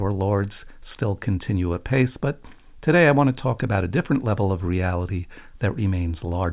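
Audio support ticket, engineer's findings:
Listened through the speech recording and nothing stood out as a problem.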